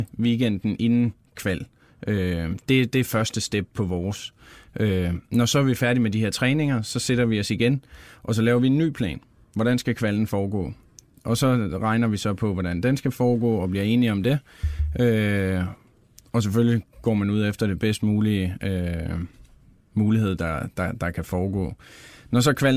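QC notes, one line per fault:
No faults heard anywhere in this speech recording.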